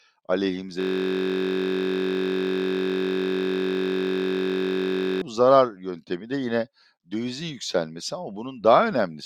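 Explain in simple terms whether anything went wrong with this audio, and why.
Something did go wrong: a system hang loop runs from 0.81 to 5.22 seconds. The computer or its sound driver froze, but the sound hardware kept replaying the last small chunk of audio it held, a piece only 21.33 milliseconds long, which fits a 1024-sample buffer. That tiny piece repeats over two hundred times, about 47 times a second, so instead of speech you hear a steady, flat buzz for over four seconds.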